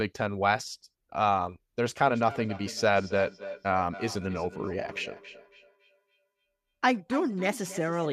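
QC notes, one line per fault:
1.8 s to 8.13 s, feedback echo between two devices: from 1.8 s onward each stretch of speech comes back roughly every 300 ms, peaking about 16 dB below the direct speech. A second device in the same room is replaying this signal through its speaker, and the first microphone captures that playback and sends it around again. Because each device's echo canceller removes only its own output, nothing suppresses the returning copy.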